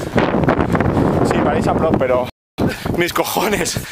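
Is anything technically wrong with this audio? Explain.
Yes, there are two faults, one straight after the other.

A playback stall runs from 2.30 to 2.58 s. The sound cuts out mid-flow and leaves a 0.28 s gap of silence. The likely cause is the player running short of data or its output thread being blocked.

Time-compressed catch-up follows from 2.58 to 2.86 s. To clear the backlog left by the stall, the player cuts out short pieces and cross-fades the remainder. The audio plays at twice normal speed with its pitch unchanged.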